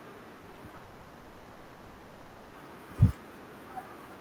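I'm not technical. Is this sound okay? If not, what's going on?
No. From 0.37 to 0.81 s there is repeated packet loss (robotic sound). Six short pieces of audio, each around 20 ms, go missing, and the receiver patches each hole by stretching the sound just before it. That makes this stretch choppy and mechanical.

From 0.83 to 2.55 s, about 1.7 seconds, the real audio is replaced by a smeared, buzzy or hissy continuation of the last sound. The likely cause is a long network dropout, with the receiver filling the entire gap until the audio resumes and that section is lost.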